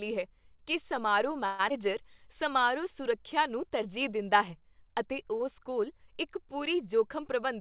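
From 1.46 to 1.61 s there is a call audio freeze. The last bit of speech is stretched into a fading buzz for about 128 ms. Then the speech resumes exactly where it stopped, with nothing lost. The likely cause is packets held up in transit, leaving the jitter buffer empty so the receiver had to improvise. Unlike a skip, this inserts time rather than removing it, and unlike a dropout it fills the gap with sound instead of silence.

Right after, between 1.69 and 1.72 s, comes a skip ahead. Around 70 ms of speech is simply gone, and the two sides are butted together with only a few milliseconds of joining. This is audio dropped while later audio was already queued, which pulls the delay back down. It is heard as an abrupt jump forward, not a pause, which separates it from the freeze just before.

From 1.72 to 2.67 s a jitter buffer slow-down follows. The receiver repeats single pitch periods over and over to rebuild its reserve, adding 66 ms in all, so this stretch plays at 93% speed. 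Sounds are drawn out, but the pitch stays put. That is what distinguishes it from a tape-style slowdown, which would drop the pitch.

From 6.94 to 7.60 s there is the opposite, a jitter buffer speed-up. Short pitch-period pieces are cut repeatedly, removing around 70 ms, and the speech runs at 109% speed. It sounds hurried but keeps its pitch, rather than rising in pitch like a sped-up recording. Throughout, the call codec leaves nothing above 4 kHz, which fits G.711 mu-law at 64 kbps.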